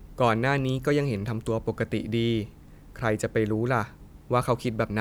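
A short speech recording with no technical faults to report: the signal level, continuity and timing stay stable across the whole recording.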